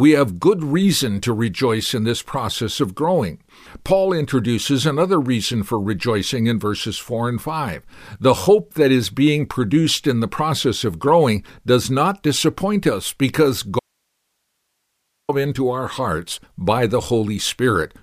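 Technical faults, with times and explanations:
13.79–15.29 s, audio dropout to a faint residue: the speech stops abruptly for 1.49 s, leaving only hiss roughly 55 dB below it, likely from the signal being lost upstream while the later path stayed live. The waveform collapses to a thin flat band, and the spectrogram shows only a faint, even noise floor.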